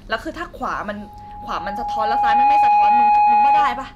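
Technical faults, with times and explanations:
0.97 s to the end: loudspeaker feedback squeal. The microphone picks up the loudspeaker it drives, and around 831 Hz the gain round that loop exceeds one, so that frequency feeds on itself and keeps growing. It swells from faint to dominant over roughly a second and a half and ends up about 15 dB above the speech. It is heard as a single piercing tone over the talker, and it never stops, because the loop is not broken before the clip ends.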